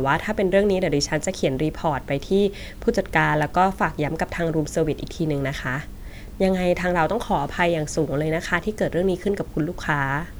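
No technical faults can be heard anywhere in this speech recording. There are no breaks, dropouts or distortion at any point to place in time.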